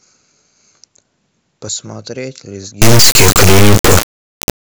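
Integer read as float takes over at 2.82 s and runs to the end of the speech. The sample data appears to have been written as 32-bit integers but decoded as 32-bit floats, so each integer's bit pattern becomes a meaningless float that is either vanishingly small or hugely over full scale. The output snaps between silence and hard clipping, giving a harsh, extremely loud square-wave buzz that cuts to nothing in the quietest moments.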